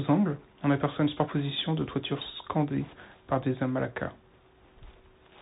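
From start to finish the speech passes through the Bluetooth CVSD headset codec, its one-bit delta coding leaving scratchy sibilants, granular hiss, and a spectrogram ceiling at 4 kHz. At 4.33 s, just after "scandées par des amalaka", a Bluetooth headset packet repeated gives a brief buzzy tick. The waveform shows about 7.5 ms of copied cycles, which fits two lost packets.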